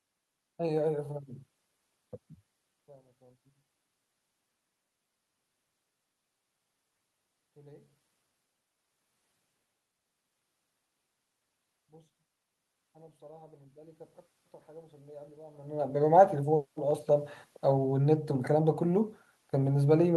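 From 14.65 to 18.1 s the automatic gain control judged the input too quiet and raised its gain, by about 5 dB in total. The voice and the room noise behind it swell together gradually over those three and a half seconds.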